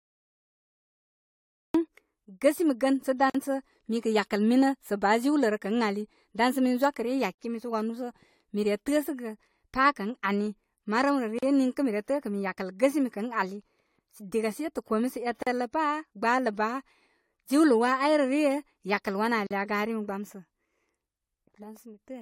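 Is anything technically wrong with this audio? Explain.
Yes, two things. There's a cut-off start: the file sits in digital silence until 1.74 s, then the speech jumps in mid-sound with no attack or fade. Capture began late, so whatever came before that point is simply missing.

There's also a gap at a join of encoded pieces every 4 s, at 3.30, 7.35, 11.39, 15.43 and 19.47 s, the last right after "yakəl wanə'". Each is a 40 to 48 ms hole with smeared edges, left by untrimmed encoder delay and end padding, and the speech resumes where it stopped.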